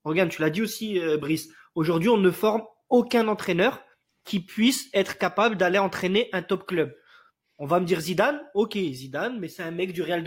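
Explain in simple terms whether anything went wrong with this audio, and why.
Nothing went wrong with this recording, as no technical faults can be heard anywhere in it. The speech comes through as it should, with no gaps, jumps or interruptions to point to.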